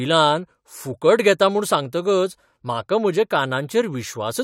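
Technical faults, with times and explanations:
Nothing in the speech stood out on listening.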